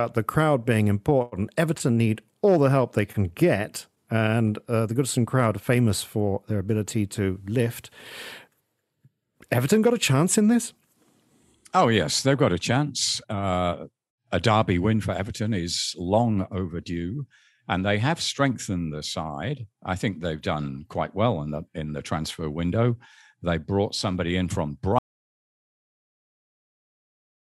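Audio dropout to silence from 24.99 s to the end of this speech clip: the sound cuts off mid-flow and the last 2.4 s are silent with no room tone, most likely because the input was lost while the recorder kept writing silence.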